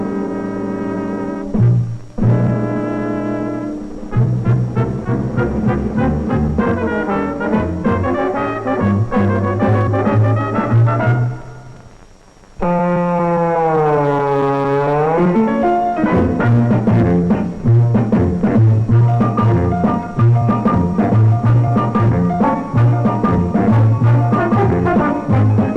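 Hard clipping runs through the whole recording: the signal was driven about 6 dB past what a stage could pass, flattening roughly one sample in twenty and adding high-frequency distortion on loud peaks.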